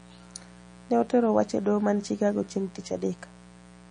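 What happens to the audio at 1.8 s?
At 1.8 s the speech sits under a mains buzz that runs through the whole clip. It is based on 60 Hz. Sharp switching spikes arrive twice per mains cycle, so harmonics stack up well into the kilohertz range. The buzz sits roughly 25 dB below the speech. It sounds steady and raspy, not a smooth hum. It stays constant under and between syllables.

The same moment also shows damage that likely comes from MP3 compression, present throughout. Nothing is heard above 9.9 kHz. The encoder appears to have cut the treble at a fixed point. Weak frequency lines drop in and out from frame to frame. This gives a watery, swirly texture, with smeared consonant onsets. The damage is plainly audible and fits a low bitrate of around 37 kbps.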